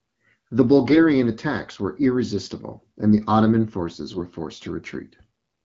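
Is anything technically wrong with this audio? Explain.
Yes. AMR bit errors occur twice in this speech, from 0.90 to 1.02 s, just before "attacks were irresistible and", and from 4.11 to 4.27 s. In each burst, around 7 percent of the weakly protected bits in the codec frames arrived flipped, yet the frames still passed their checksum and were decoded. The excitation pulses landed in the wrong positions and the fine pitch, gain and spectral values were skewed, so pitch and loudness roughly hold while the voice turns briefly hoarse, scratchy and gargly. The surrounding wideband AMR coding carries only light codec colouring.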